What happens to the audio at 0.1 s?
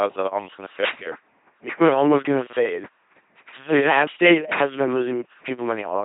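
At 0.1 s the speech is already going through heavy LPC-10 vocoder damage, which runs the whole clip. Each moment gets a buzzy pulse train or hiss through a simple vocal-tract filter, so it sounds robotic and mechanical, with nothing above 3.8 kHz. That fits the 2.4 kbit/s rate.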